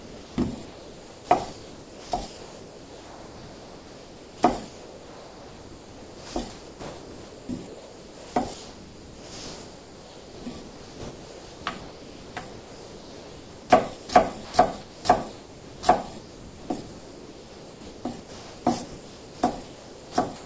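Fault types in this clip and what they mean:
Sound dropped by the voice detector: The sound gives way to steady synthetic noise in single gaps, likely because the sender's detector judged it as background and stopped transmitting. This happens at 0.00–0.38 s, 13.97–14.09 s, 14.45–14.54 s, 14.81–15.05 s and 15.32–15.83 s. Each gap is one clean dropout, not repeated flicker.
Sound chopped by the voice detector: From 0.65 to 13.70 s and from 16.19 s to the end, the sound is choppy. It has two or more holes filled with synthetic noise, likely from the detector toggling transmission again and again rather than stopping once.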